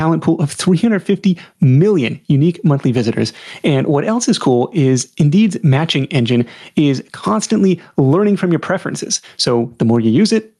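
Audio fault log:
throughout, gain pumping: input gain likely set far too high, so a fast limiter clamps down on each loud burst of speech. The gain swings by roughly 15 dB, leaving levels squashed together.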